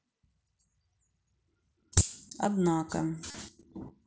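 Concealed Bluetooth headset packet loss occurs at 1.99 s, a brief dropout of about 15 ms, consistent with a couple of missing frames. The receiver hid the gap by repeating the closest-matching piece of the preceding waveform. At 3.30 to 3.35 s a longer run of about 37.5 ms was patched the same way, giving a short buzzy, steady-level tone and a slight warble as real speech resumes over the mSBC link.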